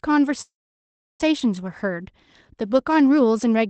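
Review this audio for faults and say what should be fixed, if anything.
A call audio freeze runs from 0.41 to 1.21 s. The last sound fades into about 0.7 s of silence, then the speech resumes exactly where it stopped. Nothing is skipped, which separates it from packet loss. This was likely caused by delayed packets draining the jitter buffer. A steadier network path or a deeper jitter buffer would prevent it.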